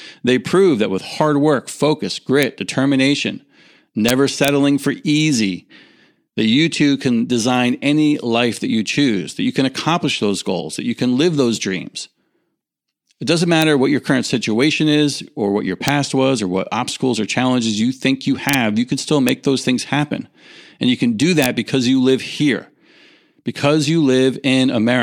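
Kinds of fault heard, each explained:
Integer overflow: loud peaks in this speech push a sum past the largest integer value, and instead of being held at the limit they wrap round to the opposite sign. You hear that as sharp, violent cracks, harsher than clipping, scattered from about 2.4 s to 21.4 s.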